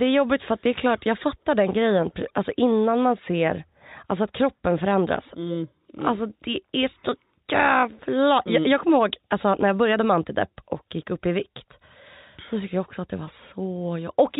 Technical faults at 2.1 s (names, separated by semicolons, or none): none